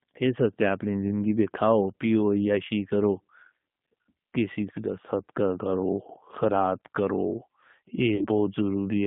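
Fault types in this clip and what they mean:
G.729 codec: The speech throughout has the slightly rough, synthetic edge of a low-rate model-based codec, consistent with an 8 kbit/s G.729A stream. The decoder rebuilds each 10 ms frame from a vocal tract filter, a pitch predictor and a few pulses, so fine detail is lost. On a spectrogram, energy sits in a band of roughly 150 Hz to 3.6 kHz, with a hard ceiling and smeared, grainy harmonics.
VoIP packet loss concealed by the speech codec: At about 8.16 to 8.27 s the decoder fills a 40 ms gap, which fits two lost packets, by extending its last pitch and filter settings at falling gain. The result is a short, stretched sound that fades. Normal sound resumes only gradually after the gap. On a spectrogram the harmonics turn flat and repetitive there. In the waveform the envelope shrinks, then rebuilds.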